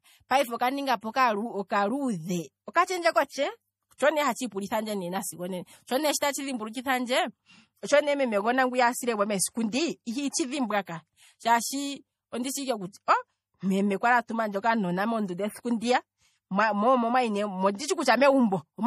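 It's a speech recording, and the whole thing has that watery, swirly quality you get from MP3 compression, likely at a low bitrate around 40 kbps. Everything above 15.2 kHz is simply gone, and weak detail keeps flickering in and out, so the damage is plainly audible. There's also a pre-echo from 6.73 to 6.75 s, right after "onena sho ne tatshi": a short hiss lasting about 24 ms creeps in ahead of an attack because the codec smeared its noise across the quiet bit before it, leaving that onset soft.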